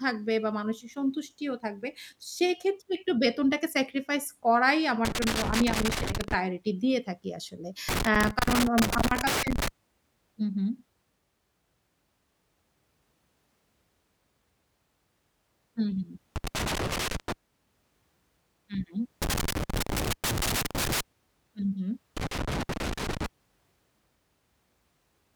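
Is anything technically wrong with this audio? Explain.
Yes. Loose connector crackle breaks into the speech five times: 5.05 to 6.34 s, 7.89 to 9.68 s, 16.36 to 17.32 s, 19.22 to 21.01 s, and 22.17 to 23.26 s. A worn or dirty contact is making and breaking. The signal chops in and out. Each burst sounds like irregular scratching and crackle.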